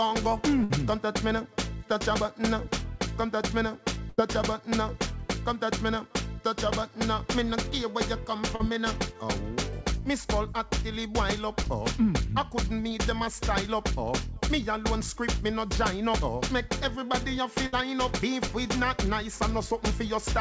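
At 0.64 to 0.72 s there is a burst of packet loss. About 60 ms of audio never arrived in time. The receiver held the last sound and faded it down, so it sounds like a brief frozen buzz or hiss. Playback then jumps ahead, and the missing stretch is simply gone. The same fault returns at 4.10 to 4.20 s, slightly longer at about 80 ms.

Short concealed packet loss follows at 8.56 to 8.61 s, covering about 40 ms. The receiver patched the hole by extending the last sound, then blended back into the real signal. It is heard as a quick smear or wobble.

Smaller repeats, about 20 ms each, occur at 11.63 to 11.67 s and 12.89 to 12.92 s. These are also heard as a brief smear or wobble.

A third burst of packet loss hits at 17.66 to 17.74 s. Again about 60 ms is held, faded and skipped.

A last short concealed packet loss comes at 18.48 to 18.52 s, about 20 ms.

Throughout, the call path's band limit is audible, with nothing above 8 kHz. 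That fits a G.722 wideband codec at 64 kbps.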